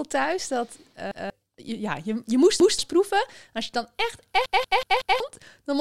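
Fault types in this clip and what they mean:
Repeated buffer: late audio made the device replay 186 ms blocks, twice doubled, once heard five times, showing identical waveform copies and vertical spectrogram seams.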